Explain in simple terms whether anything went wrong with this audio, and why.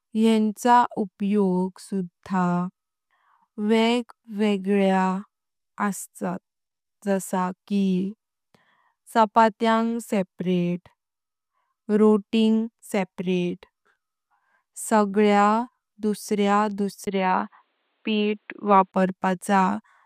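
After "सगळ्यांक दुसरा", a tiny gap, then speech sounds dull and boxy from 17.05 to 18.94 s. Likely cause: input switched to a poorer device.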